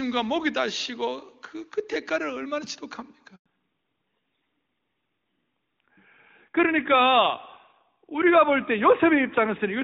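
At 3.36 s the call was passed from one network to another, and for about 100 ms, until 3.46 s, no speech frames reached the receiver. This handover gap makes the speech fade out within a few tens of milliseconds and leaves a short silence, so that stretch is lost.

From 3.46 s to the end, the link fell back to narrowband. Before the handover the clear, full sound fits HD Voice at its highest rate, and after it the audio sounds like AMR-NB at 12.2 kbit/s, with nothing above 4 kHz. The speech suddenly turns duller and rougher.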